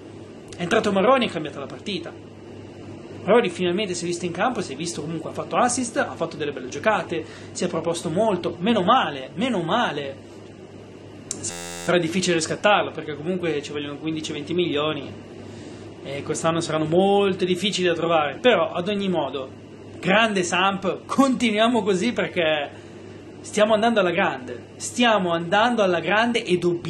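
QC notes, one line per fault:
11.51–11.88 s, system hang loop: one 11.61 ms slice repeats 32 times, giving a steady 86.1 Hz buzz. That fits a frozen 512-sample ring buffer.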